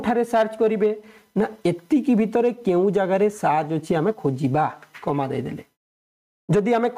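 All the way through, the gain is pulled down on each loud sound, swinging by around 15 dB, with loud and soft parts squashed together. This is gain pumping, likely from gain set far too high and a fast limiter clamping down on each peak.

From 0.35 to 0.86 s, and again from 6.56 to 6.86 s, the loudest moments crackle. This is hard clipping: the signal overdrives a stage by about 4 dB, so its peaks are sheared flat, spraying harmonics high up the spectrum.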